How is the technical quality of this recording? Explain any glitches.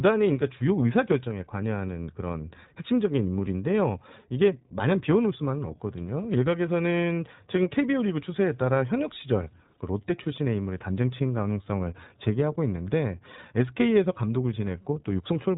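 The recording is low-fidelity throughout, with plainly audible iLBC codec damage over the whole of the speech and no isolated glitches. iLBC is a narrowband VoIP codec that cuts the signal in 20 ms frames and codes each frame's excitation on its own, without relying on the previous frame. Here nothing passes above 3.8 kHz, so the speech sounds muffled and telephone-like, with a slightly rough, synthetic texture, which fits the codec's 15.2 kbps mode.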